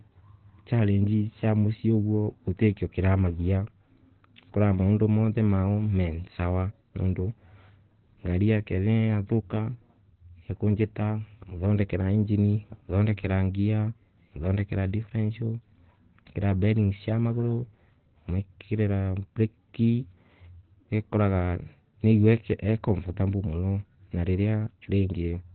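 Speech sounds muffled and hoarse throughout, with nothing above 4.3 kHz, likely from heavy Opus compression in its narrowband speech mode, consistent with roughly 12 kbps.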